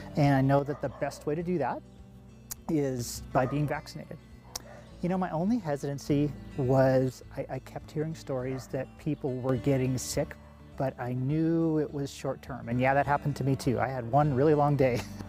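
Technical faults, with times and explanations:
0.59–2.99 s, 3.70–6.10 s, 7.09–9.49 s, 10.32–12.72 s and 13.84–14.13 s, one channel drops out: a stereo channel is likely lost for these stretches, so the mono sum abruptly falls about 6 dB, with the level snapping back at each end.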